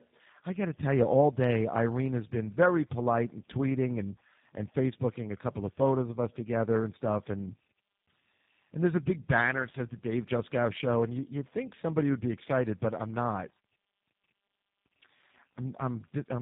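Throughout, the speech carries tandem speech coding: two low-rate speech codecs in a row, the second reworking the first's errors, with nothing above 3.8 kHz. It sounds rougher, duller and more warbly than any single codec would, which fits GSM full rate feeding G.729A.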